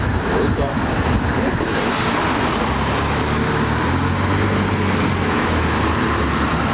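Gain pumping runs through the whole clip. The gain is pulled down on every loud sound, a swing of around 10 dB. The likely cause is input gain set far too high with a fast limiter clamping it. The narrowband call path adds its coding noise and stops at 4 kHz.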